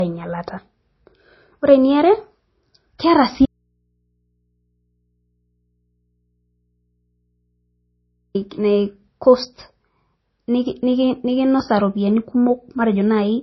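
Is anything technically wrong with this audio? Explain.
Yes, there are two faults in this speech clip.

Throughout, the sound carries low-bitrate artefacts and has no content above 5.8 kHz, even though the file is high-bitrate. This is likely low-bitrate audio saved at a high bitrate: the dull, band-limited character fits a 24 kbit/s MP3 re-encoded to 320 kbit/s. The larger file cannot restore what the first encoding removed.

From 3.46 s to 8.35 s, about 4.9 s of speech drops out abruptly and leaves only mains hum, roughly 50 dB below the normal signal level. The likely cause is an audio dropout to a faint residue: the signal was lost while the path after the break stayed live and picked up hum from the open input.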